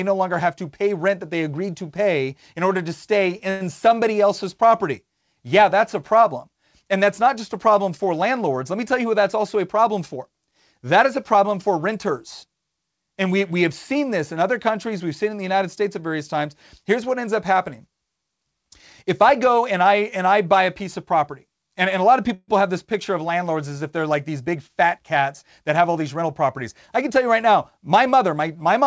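At 3.50 to 3.63 s the speech stalls into a brief fading buzz of about 104 ms before carrying on intact. This is a call audio freeze, likely from packets held up in transit, so the emptied jitter buffer stretched the last sound to fill the wait.

From 9.00 to 10.52 s, just after "me tell", the speech runs about 7% fast at unchanged pitch. This jitter buffer speed-up comes from an overfull jitter buffer trimming tiny pitch-period slices, about a tenth of a second in all, to cut the delay.

The same freeze returns at 22.34 to 22.51 s, between "and a lot of" and "have this picture of". There is a fading fill of about 135 ms, whose last 30 ms goes silent.

After "if they're like these", from 24.41 to 26.23 s, the speech hurries again at about 6% fast, with around a tenth of a second removed. Throughout the clip the G.722 call path leaves nothing above 8 kHz.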